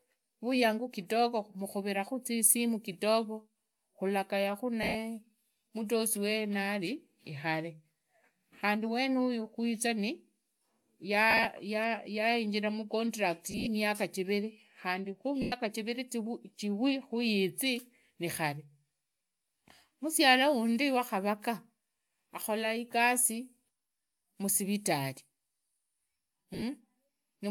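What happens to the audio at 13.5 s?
Bluetooth LE Audio frames were lost between 13.51 and 13.67 s, just after "yainjira mucontract". About 100 ms of the stream went missing, scattered in short gaps over 160 ms, which fits ten 10 ms frames, with the longest run around 40 ms. The LC3 decoder filled each gap by replaying the last good spectrum with randomised signs, so the voiced speech there turns into a brief, noisy smear rather than clean tones.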